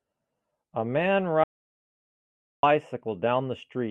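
At 1.44 s the speech cuts off mid-flow into silence until 2.63 s, a gap of about 1.19 s. This audio dropout to silence likely came from a lost input while recording continued, writing silence. Unlike a quiet pause, no room tone remains underneath.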